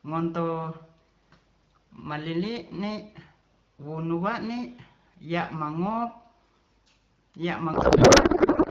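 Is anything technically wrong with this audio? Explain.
Yes. A codec payload misread runs from 7.73 s to the end at 8.71 s. The decoder unpacks the AMR wideband bits with the fields shifted, which fits octet-aligned frames being read as bandwidth-efficient. The speech, clear until then at 12.65 kbit/s, turns into garbled noise and warble that barely tracks it.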